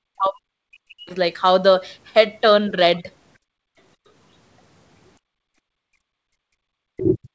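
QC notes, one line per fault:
0.0–0.48, 0.7–1.15, 5.27–5.35, 6.1–6.25 and 6.42 s to the end: speech suppressed in double talk. The speech drops by about 40 dB, likely from the echo canceller ducking both talkers, leaving near-empty gaps in the waveform and spectrogram.
2.98–3.03 s: other side's voice leaking through. A faint second voice, about 35 dB below the speech, likely from uncancelled loudspeaker echo, appears as a thin, brief smear on the spectrogram.
3.38–3.77 and 5.63–5.82 s: background gated by the echo canceller. The room sound drops by about 35 dB and about 40 dB respectively, showing as a flat waveform notch with a darkened spectrogram band.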